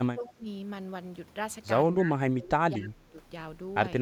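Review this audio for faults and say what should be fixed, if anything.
Speech suppressed in double talk at 0.14–0.46 s and 1.94–3.21 s. The level drops by up to about 25 dB, likely from the echo canceller muting it as echo. Improve double-talk detection.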